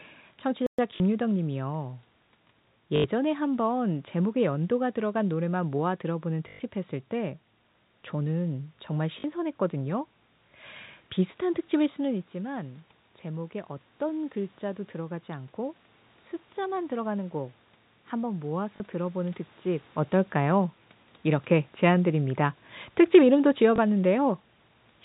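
At 0.67 to 0.79 s the speech drops out for 120 ms and then resumes. This is a playback stall, likely from the player running short of data or being blocked. Unlike the later faults, the gap is plain silence with no repeated fragment.

From 0.96 to 1.00 s, 2.96 to 3.04 s, 6.48 to 6.60 s, 9.20 to 9.24 s, 18.76 to 18.80 s and 23.76 to 23.78 s, packet loss with the last packet repeated gives short robotic stutters of 40 to 120 ms, and a small blip of 20 ms at 23.76 s. On the longer runs there is a buzz that fits 20 ms packets. The sound keeps going rather than falling silent.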